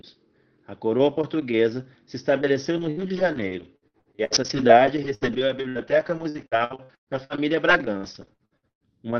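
Right after "coroa portuguesa se estabeleceu", from 2.77 to 8.83 s, repeated packet loss (robotic sound) sets in. Short dropouts of up to 117 ms recur throughout, each patched by stretching the last sound. On a spectrogram this appears as smeared, frozen harmonic bands, with waveform stutters and dips throughout a band-limited spectrum that stops near 6 kHz.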